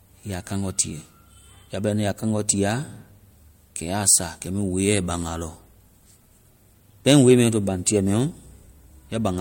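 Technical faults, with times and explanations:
4.09 to 4.15 s and 7.08 to 7.34 s, hard clipping: the peaks overdrive the signal chain by about 2 dB just before "sa kɛ" and by about 4 dB in the later stretch, so the loudest excursions are cut flat, giving a brief crackly harshness, rougher in the second. On the waveform the tops and bottoms sit squared off at a fixed ceiling; the spectrogram shows vertical smears of added harmonics extending high above the speech energy at those moments.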